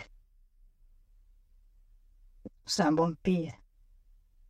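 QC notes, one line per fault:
Throughout: channel delay (comb filtering). One channel trails the other by around 10 ms, and once the two are summed to mono the speech cancels against itself at evenly spaced frequencies, starting near 50 Hz and repeating every 100 Hz or so, which gives the hollow, phasey colouring. On a spectrogram this shows as fixed dark horizontal bands stacked up through the spectrum that do not move with the speech. The waveform shows no obvious break.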